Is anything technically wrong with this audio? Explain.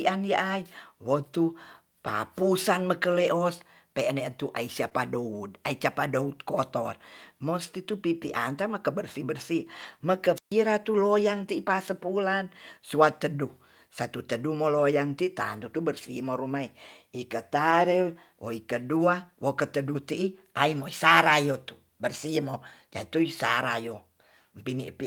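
Yes, there are three kinds of fault in this speech clip.

Lost packet rebuilt from error correction at 2.05–2.07 s, 3.19–3.29 s, 4.93–4.95 s, 9.83–9.85 s, 14.75–14.81 s (just after "satu teduh") and 17.71–17.73 s. Each lost packet was replaced by the low-bitrate backup copy carried in the following packet, so nothing goes silent. The patched stretches, mostly 20 ms but 60 ms at 3.19 s and 40 ms at 14.75 s, sound briefly rougher and grainier.

Short concealed packet loss at 4.89–4.93 s. About 20 ms of audio arrived too late, and the decoder extrapolated roughly 14 ms from the preceding sound before blending back in. This leaves a fleeting smear or wobble, directly followed by the error-corrected stretch at 4.93 s.

Wireless microphone squelch dropout at 10.35–10.53 s. The radio link faded until the receiver's squelch cut the output. Hiss swells, then there is about 135 ms of near silence before the speech returns.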